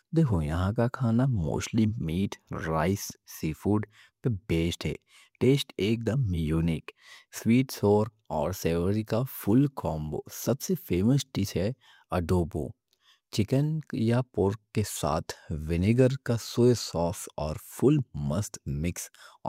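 No technical faults can be heard anywhere in the speech recording. There is nothing here that calls for a timestamp or an explanation.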